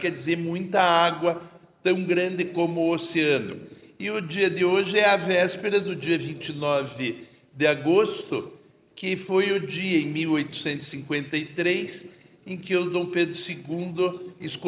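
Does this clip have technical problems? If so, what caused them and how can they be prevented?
No, nothing stood out on listening to this clip, so there is no cause to trace and nothing that needs preventing.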